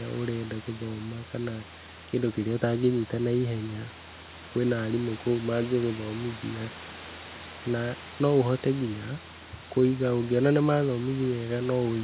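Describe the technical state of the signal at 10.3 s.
At 10.3 s the signal is intact, with the room noise sitting about 17 dB below the speech and the band ending at 4 kHz as expected from the G.711 A-law call path.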